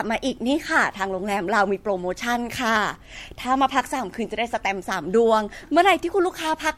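Generation loss runs through the whole speech clip: swirly, smeared and hollow, nothing above 16.5 kHz, likely from a few MP3 passes at something like 64 kbit/s.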